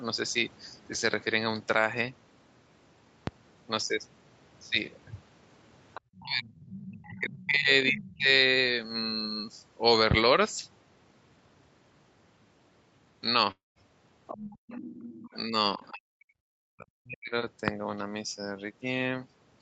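A loud pop lands at 3.27–3.31 s, peaking about 15 dB above the speech, likely a voltage step from a plug, switch or static discharge. It is a sharp thump over the speech. On the waveform it is a single tall spike, and the spectrogram shows a thin vertical stripe across all frequencies.

From 5.94 s the other side's voice leaks through in short scraps at 5.94–6.01, 6.57–6.86, 7.19–7.44 and 7.99–8.17 s, about 20 to 25 dB below the talker. It is likely loudspeaker echo that the canceller did not fully remove. The scraps are faint, and on the spectrogram they are weak harmonic traces that don't follow the main speech.

Overlapping these, from 6.17 to 8.28 s, the talker's speech is suppressed in double talk, dropping by up to about 40 dB across roughly 2 s. The canceller likely could not separate the talker from the echo and turned everything down. The voice dips and breaks into pieces. The waveform envelope caves in, and the spectrogram thins out, losing its upper harmonics.

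A second loud pop at 10.11–10.15 s, about 20 dB above the signal, likely comes from the same kind of electrical glitch. It shows the same isolated spike and full-band vertical line.

At 13.51–13.78 s there is a long network dropout. About 0.24 s of audio never arrived, likely lost packets. The receiver stretched the last sound into a fading buzz, and roughly the last 0.16 s is silent before speech resumes with that piece missing. The waveform shows a decaying smear and then a flat gap, and the spectrogram shows a blurred band and then an empty column.

At 14.27–15.37 s the far side leaks through again, now only about 15 dB below the talker and lasting over a second. This is likely uncancelled loudspeaker echo. It comes through as a second voice, with a competing set of harmonic lines below the 8 kHz ceiling of the call path.

Straight after, at 15.44–17.34 s, speech is again suppressed in double talk for about 1.5 s in total, by up to about 40 dB. 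This is likely the canceller's suppression reacting to the overlap. The audio chops and dulls, with gaps in the envelope and darkened high bands.

A final loud pop at 17.68–17.72 s, about 20 dB above the signal, is likely another electrical transient. It appears as a single spike on the waveform.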